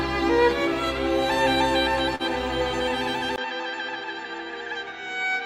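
At 2.15 to 2.22 s, short concealed packet loss: about 40 ms of audio never arrived, and the receiver bridged 39 ms of it by extending the preceding sound before crossfading back. It is heard as a brief smear.

From 3.36 s to the end, the sound turns duller and a little quieter after a 20 ms gap, most likely because the input switched to a poorer device. The spectrogram shows nothing above 7.6 kHz from that point, a new noise floor sits roughly 30 dB under the signal, and the waveform envelope drops by about 5 dB.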